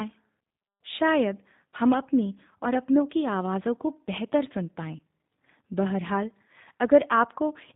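A low-rate CELP speech codec carries the whole clip, and the sound fits G.729 at 8 kbit/s. The decoder rebuilds the speech from a vocal tract filter, a pitch predictor and a few pulses per subframe rather than from the waveform itself. The codec damage is plainly audible. Everything above 4 kHz is gone, so the speech sounds dull and boxed-in, and it carries a slightly rough, synthetic grain throughout.

At 1.71 to 1.76 s, and again at 4.97 to 4.99 s, VoIP packet loss concealed by the speech codec breaks in. Each gap fits a single lost packet of about 20 ms. With no data arriving, the decoder repeats its last pitch and filter settings at falling gain. Each moment turns into a brief buzzy tone or coloured noise instead of real speech. The next few frames still sound weak or distorted because the decoder's state has to rebuild.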